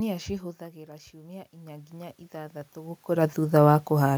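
Speech with one real fault: automatic gain rising from 0.58 to 3.74 s. The talker shifts away around half a second in, the input drops about 13 dB, and the gain control slowly climbs about 13 dB to compensate, lifting the room noise right along with the voice.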